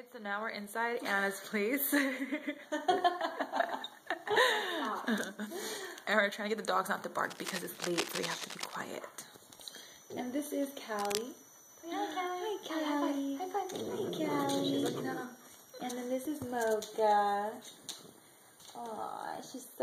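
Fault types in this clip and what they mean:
Cable scratch noise, 7.24 to 8.75 s and 10.99 to 11.21 s: dense, uneven bursts of scratching and rustling sit over the sound at nearly its own level, likely from a worn cable, connector or control being moved so its contact resistance fluctuated rapidly.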